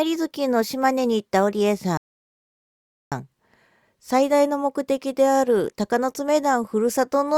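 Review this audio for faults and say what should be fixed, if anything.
A rebuffering stall interrupts the speech from 1.97 s to 3.12 s: playback drained its downloaded audio, fell silent, then resumed exactly where it stopped, so nothing is lost but 1.14 s is added. Larger startup buffering or adaptive bitrate switching would prevent it.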